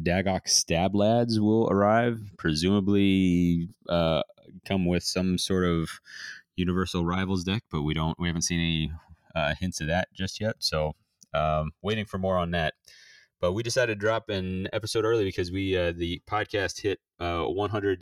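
Throughout the speech, the channels drift apart: the two sides were captured on devices running from separate clocks, off by roughly 200 parts per million, so the gap between them widens steadily to around 3 ms by the end. Folded to mono, the comb-filter notches slide slowly through the spectrum, giving a gradual flanging sweep. Unlike a flanger effect, which oscillates back and forth, this sweep moves only one way, as the delay keeps growing.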